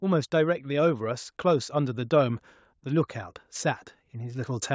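From 0.66 s to 2.08 s the level creeps upward, a case of automatic gain rising: the gain control judged the incoming speech too quiet and kept raising its gain, about 3 dB in total over that span. Voice and background noise swell together, so the background grows along with the speech. On a waveform the envelope widens gradually across those 1.4 seconds. On a spectrogram every band brightens evenly, capped at 8 kHz by the call's normal microphone processing.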